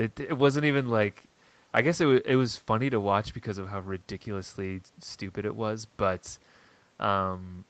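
No technical faults can be heard in this speech.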